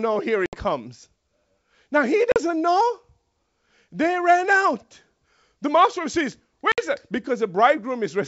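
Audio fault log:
0.46–0.57, 2.32–2.37 and 6.72–6.85 s, packet loss on an ADPCM call: three hard-edged silent holes of about 70, 40 and 60 ms (the last just after "master says"), each spanning a handful of packets. The wideband G.722 sound around them stays clear. The decoder's adaptive predictor and step size lose track of the sender's during each gap, so speech resumes slightly distorted before resyncing within tens of milliseconds.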